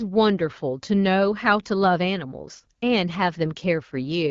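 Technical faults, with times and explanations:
The speech comes through an AMR wideband (HD Voice) link at 12.65 kbit/s, a rate at which it stays clear within the roughly 7 kHz band that codec carries, and nothing in the signal is faulty.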